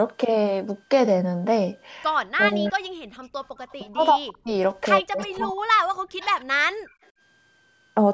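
Speech, marred by a switching supply whistle throughout: a faint high tone wandering between 1.54 and 1.64 kHz, far below the voice, consistent with a power supply running in audible burst mode. Speech suppressed in double talk appears at 2.32–2.93 s and 3.73–6.43 s, where the voice dips very deeply or breaks into pieces, likely because an echo canceller, facing both sides talking at once, turned everything down. Echo leak is heard at 2.67–2.72 s, 3.6–3.73 s and 6.87–7.07 s as a faint copy of the voice trailing by 148 ms: loudspeaker sound the canceller likely failed to remove. Background gated by the echo canceller occurs at 3.22–3.32 s, with the room sound dropping about 17 dB, and at 6.71–6.94 s, dropping about 35 dB, as the canceller clamped the microphone during playback and then released it.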